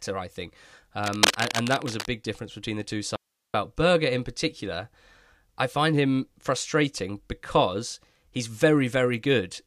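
A speech recording with two faults. From 1.04 to 2.06 s, cable scratch noise sits over the speech at roughly the same level, dense uneven rustling rather than isolated clicks, likely from a worn connector being moved. From 3.16 to 3.54 s, an audio dropout to a faint residue removes the speech for 380 ms, leaving only hiss about 55 dB down. Its abrupt edges set it apart from a natural pause, likely from a brief signal loss upstream.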